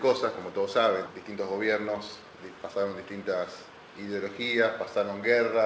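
At 1.06 s the audio lurches forward. There is no silence or fill, just an abrupt splice where about a second of material is simply gone and the two sides butt together almost seamlessly. This is a skip ahead. Audio that had already queued up behind a late stretch was released, and the receiver discarded the backlog rather than play it, cutting the accumulated delay by roughly a second in one jump.

From 1.16 s to 2.70 s the sound runs noticeably quick, about 110% of normal speed, yet the pitch stays put, giving a rushed, compressed feel. This is a jitter buffer speed-up. With more audio held than the buffer aims for, the receiver repeatedly snipped out short pitch-period-sized pieces, removing around 150 ms in total to shrink the delay back down. Throughout, the G.722 call path leaves nothing above 8 kHz.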